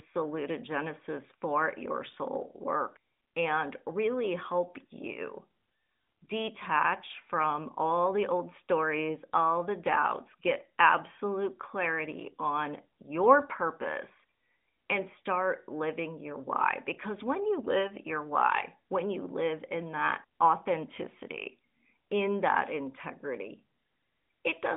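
No technical fault turns up anywhere in this speech recording. It has passed through the AMR narrowband mobile codec at 12.2 kbps, so the sound sits within a telephone band of roughly 200 Hz to 3.6 kHz and carries the light coding texture of that mode.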